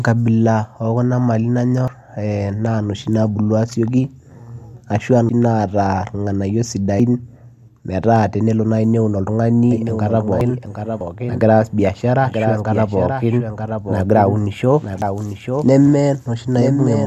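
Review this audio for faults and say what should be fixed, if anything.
The speech jumps ahead at 1.88, 5.29, 7.00, 10.41, 11.01 and 15.02 s, each a sudden skip with no gap, losing roughly a tenth of a second, a bit more at 5.29 and 10.41 s. That's likely a dropped buffer (overrun): the capture program didn't read its samples before the hardware wrote over them, so a chunk vanished and the audio either side got spliced straight together. To prevent it, give the capture thread higher priority or use larger buffers so reads keep pace.

From 9.71 s to the end there's a doubled audio track. A second full-band copy of the speech runs about a second behind, about 5 dB quieter, with no reverb tail or room colour, and it cuts in abruptly at 9.71 s. That points to the same signal being mixed in twice, likely either captured again through a slower path or left over as an out-of-step second copy from an edit. 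To prevent it, check the routing and the edit so only one copy reaches the mix.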